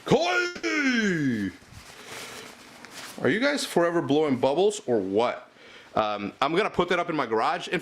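At 0.45 s a call audio freeze begins and lasts until 0.65 s. The last sound is stretched into a fading buzz or hiss for about 180 ms, with no silence. Packets were likely delayed, emptying the jitter buffer. The audio then resumes where it stopped, so nothing is lost.

From 5.94 s to 7.50 s there is a jitter buffer speed-up. The buffer held excess audio, so the receiver cut many short pitch-period pieces, removing roughly 150 ms. Playback runs at about 110% speed with unchanged pitch. It sounds hurried.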